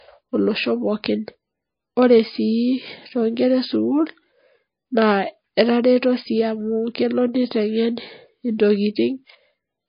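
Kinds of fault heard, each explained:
Low-bitrate audio saved at a high bitrate: Throughout the speech, nothing is present above 5 kHz, leaving it muffled and dull, with the smeared, watery texture of heavy MP3 compression. The cause is likely an earlier MP3 encode at a very low rate, around 24 kbit/s, later re-saved at about 192 kbit/s. The second pass keeps the first encode's cut-off and artefacts but cannot restore the missing detail, so the larger file sounds no better.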